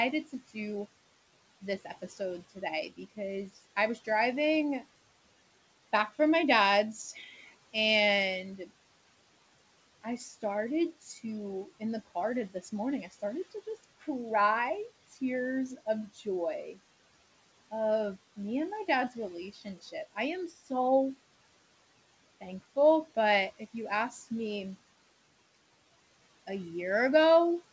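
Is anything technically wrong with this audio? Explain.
Yes. Speech was cut by the noise suppressor at 1.62–4.07, 7.14–7.74, 11.0–11.19, 11.8–14.04, 15.77–16.76 and 19.1–20.71 s. Mistaking quiet speech for background, it dropped brief stretches by about 10 to 14 dB, swallowing consonants and word endings. A waveform shows sudden envelope dips, and a spectrogram shows faint gaps in the speech energy.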